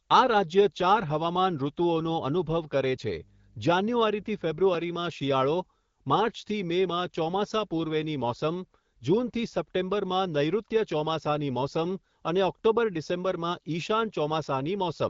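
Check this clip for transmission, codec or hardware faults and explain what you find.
There's one fault here: a burst of mains hum from 3.13 to 4.63 s. A steady 50 Hz tone slides in under the speech, sitting roughly 30 dB down, then drops out after a second and a half. That's the power line getting coupled into the signal path, most often through a ground loop or a transformer sitting close to the cabling. It comes across as a low, constant drone. The HD Voice (AMR wideband) band limit is audible throughout, with nothing above about 7.5 kHz, which fits a mid-rate AMR-WB setting.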